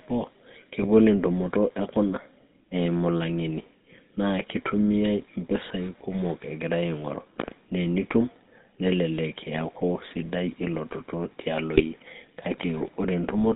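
GSM full-rate codec coloring runs through the whole clip. The speech is rebuilt from a vocal-tract model driven by sparse, regularly spaced pulses, with nothing above 4 kHz, giving a plainly audible buzzy, gravelly roughness that fits a 13 kbps full-rate coder.

GSM bit errors strike from 0.82 to 0.89 s and again from 11.74 to 11.82 s. Corrupted filter, pitch or gain values reached the decoder for a few frames, each time breaking the speech into a brief squawk or gargling pop with a warped spectrum.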